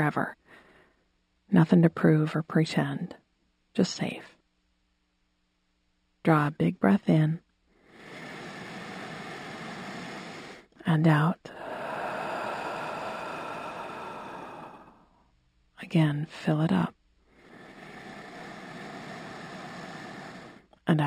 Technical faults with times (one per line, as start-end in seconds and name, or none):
0.00-21.07 imaging from linear upsampling